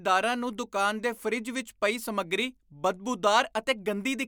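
No technical faults can be heard anywhere in this speech recording. There is nothing in the audio that points to a problem in how it was captured or carried.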